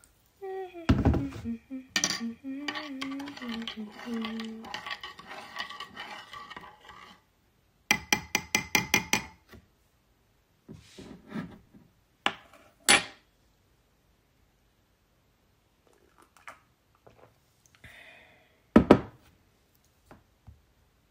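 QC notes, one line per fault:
No faults heard in this recording.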